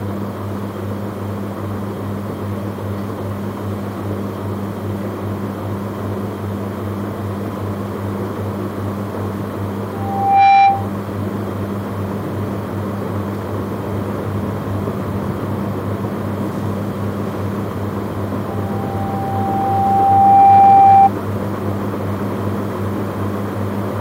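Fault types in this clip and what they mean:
Loudspeaker feedback squeal: a microphone is hearing the loudspeaker it drives, and at one frequency, here 787 Hz, the loop gain goes above unity, so that tone feeds on itself and climbs. It appears twice. From 9.93 to 10.92 s it swells within about half a second. From 18.47 to 21.10 s it builds more slowly, over roughly two seconds. Both times it peaks about 15 dB above the rest of the sound before dropping away.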